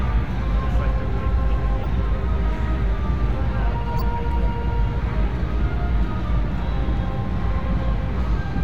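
At 1.76 to 1.86 s, a corrupt frame decoded produces a short burst of noise. Damaged bits across several frames were played anyway. At 3.96 to 4.02 s, a few frames again throw energy into wrong frequencies, giving a louder blip.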